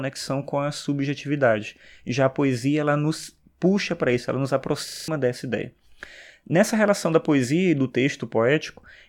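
Right after "para isso ela nos", from 4.88 to 5.08 s, there's a system hang loop. The system stalled while the hardware kept replaying the same 40 ms chunk five times, so you hear a 25 Hz buzz, and about a fifth of a second is gone before "dessa ideia".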